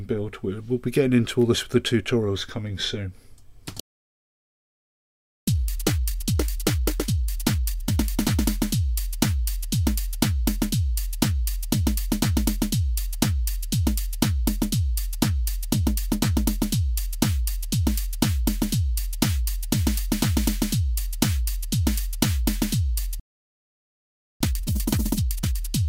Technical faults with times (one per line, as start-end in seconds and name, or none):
3.80-5.48 playback stall
5.48-8.48 time-compressed catch-up
23.20-24.41 playback stall
24.41-25.61 time-compressed catch-up